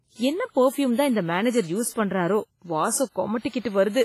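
Throughout the speech there is heavy damage typical of WMA compression, likely from a low-bitrate encode, with the sound pointing to roughly 24 kbps. A transform codec at that rate zeroes weak spectral lines and leaves quantisation noise smeared across long blocks, so the audio sounds washy and ringing, with a hiss that swells and fades with the level. Nothing is present above 15.4 kHz, which fits the encoder discarding the top band.

Pre-echo appears at 0.50 to 0.54 s (44 ms), 1.90 to 1.95 s (58 ms), and 3.49 to 3.53 s (47 ms). In each case a sharp attack sits late in a coding block, and the noise sized for that loud onset spills into the quiet stretch before it. The result is a brief hiss just ahead of each attack, which then arrives softened and smeared.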